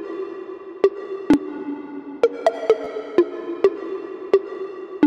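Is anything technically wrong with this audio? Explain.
Yes. There is a repeated buffer at 1.34 s and another from 2.84 to 2.87 s. New audio did not reach the output in time, so the device replayed the chunk it already held, about 11.6 ms long, which fits a 512-sample buffer. The first event repeats it once and the second twice, with essentially nothing dropped. Because each chunk is so short, the hard joins are heard as a click or brief buzz at 1.34 s and at 2.84 s.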